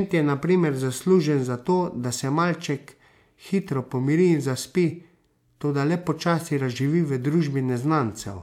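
Nothing goes wrong anywhere in this speech recording; there's no technical fault to point to at any moment.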